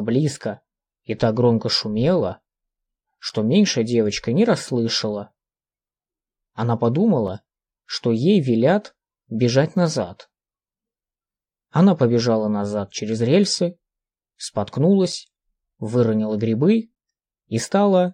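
A block of digital silence appears at 3.29 s, again at 7.27 s and at 15.12 s. Each time the sound drops straight to silence for about 5.8 ms and returns with no fade, which fits a 256-sample output buffer that was not filled in time. The abrupt edges on both sides of each hole are heard as a tick or dip rather than a noticeable gap. The same length at all three points suggests a repeating buffer underrun.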